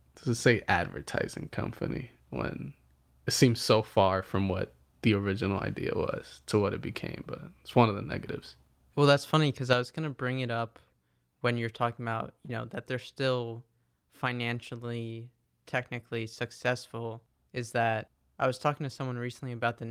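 One channel drops out at 9.73 s, after "that's funny because": the speech abruptly falls about 6 dB to the end, likely because one stereo side was lost before mono summing.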